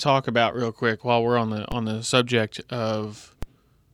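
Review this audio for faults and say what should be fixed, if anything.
A DC step occurs at 1.72 s, after "while we're on the", and again at 3.43 s: the zero line jumps by about −17 dBFS and decays through a 20 Hz high-pass, giving a low thump or click. Holding the converter's input offset steady, or high-passing before any switching point, would prevent it.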